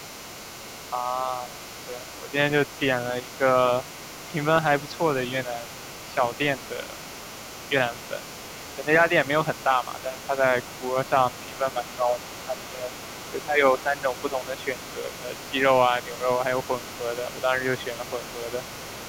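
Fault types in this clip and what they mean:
Other side's voice leaking through: a faint second voice, roughly 20 dB below the talker, runs the whole clip, likely loudspeaker echo left uncancelled, not separate background chatter.
Speech suppressed in double talk: the talker dips several dB, up to about 10 dB between 9.64 and 18.61 s, likely echo-canceller ducking during overlap, unlike dropouts that cut fully.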